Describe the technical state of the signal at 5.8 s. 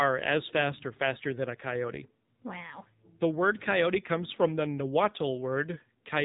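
At 5.8 s the speech is still carrying the AMR narrowband mobile codec, as it does for the whole clip. Nothing above about 3.8 kHz survives, so sibilants and breath detail are gone. The codec rebuilds the voice from a vocal-tract model excited by a few pulses per short sub-frame. The damage is plainly audible: a buzzy, synthetic edge. That level of coarseness points to a low mode, around 7.4 kbps.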